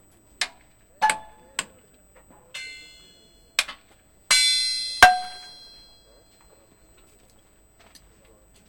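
From start to finish, a USB whine sits under the sound. It is a steady tone at 8 kHz, and that is where it is strongest. It stays at a fixed pitch. It lies roughly 40 dB below the sound itself. The pitch gives away the cause. A USB bus pulls current in bursts every 125 microseconds, and 8 kHz is that rate. Those bursts leaked into the audio path through the power or ground.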